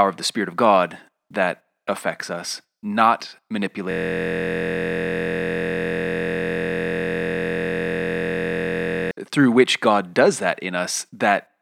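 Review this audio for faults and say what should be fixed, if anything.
A system hang loop runs from 3.91 to 9.11 s: a 23.2 ms slice of the speech repeats exactly, giving a steady 43 Hz buzz that fits a 1024-sample ring buffer. Unlike a dropout or glitch stutter, it neither goes silent nor varies. To prevent it, keep the audio thread from blocking and have the driver mute output when buffer refills stop.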